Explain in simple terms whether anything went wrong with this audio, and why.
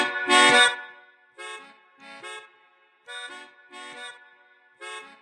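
From about 0.55 to 1.15 s there's a fast ticking, like a zip being pulled, riding on the sound as it gets much quieter. That's zipper noise: the volume was lowered in small jumps, about fifty a second, instead of gliding, and each jump clicks.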